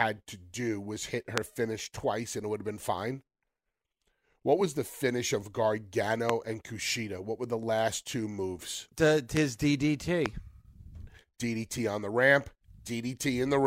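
A loud pop cuts through the speech four times: at 1.38–1.40 s, 6.30–6.32 s, 9.37–9.39 s and 10.26–10.28 s. Each is a single sharp pop, likely from a brief voltage step or pulse such as a plug, switch, static discharge or driver glitch, while the speech continues underneath. The first peaks roughly 25 dB above the speech and the others about 20 dB. On a waveform each shows as a tall isolated spike, and on a spectrogram as a thin vertical broadband line.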